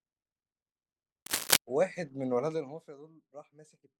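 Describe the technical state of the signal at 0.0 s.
At 0.0 s the speech signal is intact, with no fault to be heard at that point.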